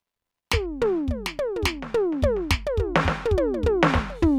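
The music signal carries no audible technical faults at any point.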